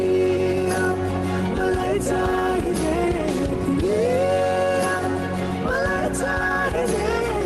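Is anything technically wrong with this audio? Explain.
No, nothing is technically wrong with this audio: it carries the ordinary character of a WebRTC call path, with high-frequency content rolling off at about 12 kHz in a way that fits Opus at around 32 kbps.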